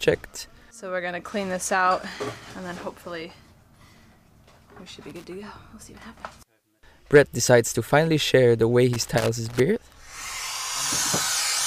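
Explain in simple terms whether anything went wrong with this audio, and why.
Something did go wrong, twice. The fault is loose connector crackle. At 5.10 to 5.24 s there is a short burst of scratchy crackle. A longer one follows from 8.93 to 9.60 s, lasting about two thirds of a second. Both are irregular, not steady. This happens when a plug or socket has a worn or dirty contact. As it shifts, the connection keeps breaking and returning, so the sound gets chopped into rough crackles.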